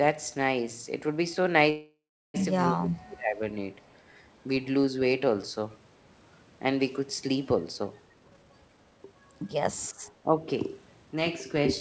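Right at 1.70 s the speech stalls in a call audio freeze that runs until 2.36 s. The last bit of sound gets stretched into a fading buzz, and then there's about 360 ms of dead silence before things pick up exactly where they left off. So roughly 0.64 s of gap has been pushed into the timeline, but nothing is actually lost. It sounds like packets got held up in transit and the jitter buffer likely ran dry while it waited.

Just after that, from 2.72 to 3.42 s, the speech gets suppressed in double talk. The level sinks by up to about 25 dB, so the voice sounds pushed into the background for most of a second. The likely cause is the far side talking at the same moment, with the echo canceller unable to tell the talker from loudspeaker echo and clamping down on everything.

At 3.83 to 3.94 s there's a short echo leak. It's a very faint scrap of the speech coming back about 0.3 s late, so it's easy to miss unless you're listening for it. 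That's likely a speakerphone on the other end whose echo canceller didn't fully scrub what its mic picked up.

From 8.05 to 9.67 s a jitter buffer speed-up kicks in. The speech runs at roughly 139% pace with the pitch unchanged, so it comes across as hurried rather than chipmunky. About 0.7 s of audio gets trimmed out in tiny pitch-period slices, which is the receiver draining a backlog after a burst of late packets to bring the delay back down.

Then at 9.95 to 10.47 s there's a second stretch of speech suppressed in double talk. It's milder this time, dipping about 15 dB, but you get the same ducked sound, likely from overlapping talk again.

The whole clip tops out at 8 kHz, which fits a G.722 call path at 64 kbps.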